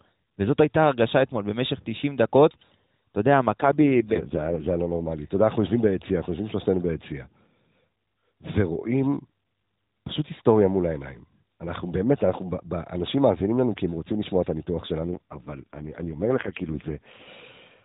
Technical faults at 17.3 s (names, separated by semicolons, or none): AMR rate drop